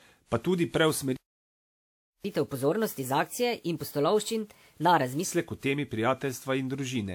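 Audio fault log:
throughout: generation loss. The sound is swirly, hollow and smeared, with blurred attacks, which fits repeated WMA 1 encoding at about 96 kbit/s, likely around four passes. On a spectrogram, smeared energy appears, and nothing shows above 20.1 kHz.
1.17–2.24 s: playback stall. The sound cuts off mid-flow and stays silent for about 1.08 s before resuming, likely because the player ran out of data or its thread was blocked. The waveform shows a flat line, and the spectrogram shows a blank vertical band across all frequencies.
2.24–5.24 s: catch-up at higher speed. The player resamples its backlog to win back some of the lost time, so playback runs at 1.25 times normal speed and pitch rises by roughly four semitones. Afterward it drops back to normal. On a spectrogram, harmonics sit visibly higher, and the waveform's syllables look compressed in time.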